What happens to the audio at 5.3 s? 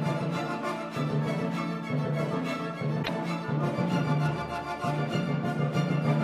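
Nothing goes wrong at 5.3 s; the audio plays through that moment intact, with no dropout, click or other fault.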